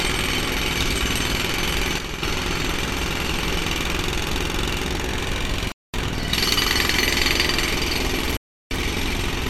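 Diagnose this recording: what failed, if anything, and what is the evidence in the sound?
From 1.99 to 2.22 s the level drops abruptly by about 6 dB, then recovers. The likely cause is one channel dropping out before the mono sum, at the converter or wiring stage.

An intermittent contact in the analogue wiring cuts the sound out twice. The first cut, at 5.69 to 5.95 s, lasts 219 ms. The second, at 8.22 to 8.84 s, lasts 343 ms. A loose cable or plug is opening the line.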